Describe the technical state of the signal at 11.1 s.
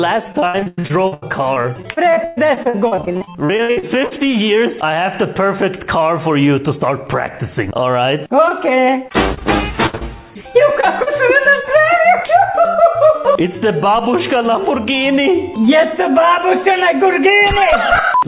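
At 11.1 s the signal is just leaving a short concealed packet loss spanning 11.03 to 11.08 s. About 40 ms never arrived, so the receiver extrapolated the preceding sound and blended back, heard as a brief smear or wobble. A spectrogram shows the filled stretch under the call path's 4 kHz ceiling.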